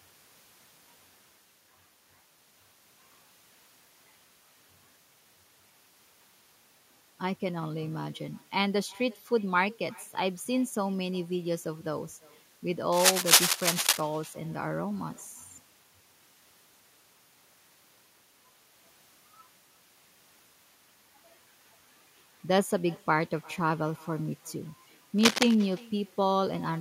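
Speech runs through the whole clip with an echo with no canceller. Each phrase returns as a faint copy after roughly 0.4 s. The copy sits about 26 dB below the talker, so it is quiet. It sounds thinner than the direct speech. The far end is playing the call on a loudspeaker. Its microphone picks that up and sends it back across the network. Nothing at that end removes the returning signal. Cable scratch noise also appears twice. From 12.92 to 14.01 s there are dense, uneven bursts of rustling, a little louder than the speech itself. From 25.18 to 25.55 s a shorter burst arrives at roughly the same level as the speech. Both sound like scratching laid over the signal. The likely cause is a worn cable, connector or control being moved, making its contact resistance jump about quickly.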